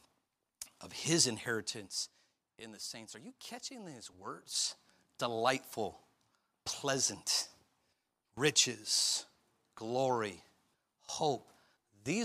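A speech clip. Zipper noise runs from 4.18 to 4.74 s, just after "you catching these". The level shifts about 10 dB in unsmoothed 2 dB steps, roughly ten a second. Each step clicks.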